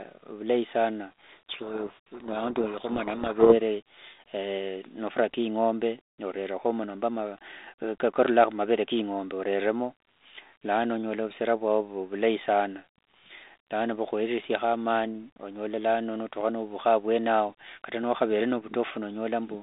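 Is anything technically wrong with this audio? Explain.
Yes. From 1.24 to 3.55 s there is a codec payload misread: the decoder takes each G.726 code word with its bits in the wrong order, so the prediction differences come out wrong and the speech drowns in harsh distortion. Unlike the light coding noise of the 32 kbit/s G.726 path here, this starts and stops abruptly.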